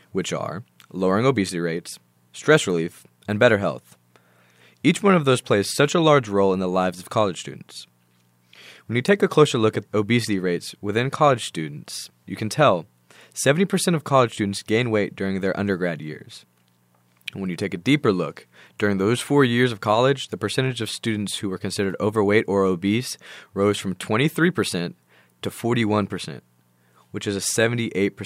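Nothing to flag: no technical faults are audible at any point in the speech.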